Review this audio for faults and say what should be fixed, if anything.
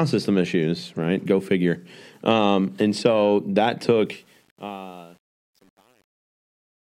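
Truncation distortion on a fade runs from 4.06 s to the end at 6.96 s, during the fade-out that starts around 4 s. The fade stage keeps too few bits and adds no dither, which fits roughly a 9-bit word length. As the level drops, the waveform collapses into coarse steps. From 4.48 s to the end, the tail turns gritty. To prevent it, apply the fade at full internal precision and add dither before any reduction in word length.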